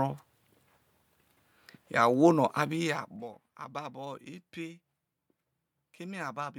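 A gain change between 2.56 and 3.32 s is applied in unsmoothed 1 dB jumps rather than as a continuous ramp, so the level falls in discrete stairs, roughly 30 per second, for a total drop of around 15 dB. Each jump puts a tiny discontinuity into the speech waveform, and in quick succession these produce zipper noise: a fine, buzzy ticking that rides on the voice for the length of the fade and stops once the level settles.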